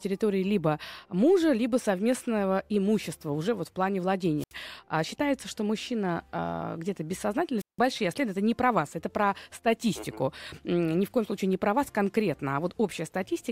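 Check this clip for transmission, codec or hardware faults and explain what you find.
Two wireless microphone squelch dropouts, at 4.38–4.54 s and 7.58–7.79 s. The analogue FM link's signal fades, hiss rises briefly, then the receiver's squelch mutes the output, leaving silent holes of about 74 ms and 169 ms before the speech returns.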